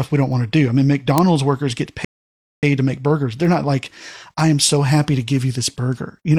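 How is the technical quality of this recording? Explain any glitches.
The speech is marred by two kinds of glitch: three isolated ticks and one dead pause partway through.

Sharp single clicks land at 0.33 s, 1.18 s and 3.45 s. Each is a bit error spike: one flipped bit in one sample throws its value up or down by a power of two, and the next sample is back on course. Because the jump lasts a single sample, it sounds like a bright, full-band tick with no relation to the surrounding speech.

From 2.05 s to 2.63 s the audio drops to complete silence, then carries on exactly where it left off. This is a rebuffering stall: playback ran dry of downloaded data and waited for more to arrive. No speech is lost, but about 0.58 s of empty time is inserted, so the phrasing is interrupted by an unnatural gap rather than a skip.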